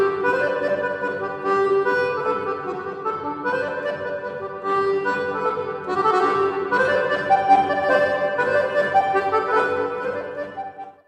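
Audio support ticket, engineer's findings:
Nothing stood out on listening, so there are no findings to log against this ticket.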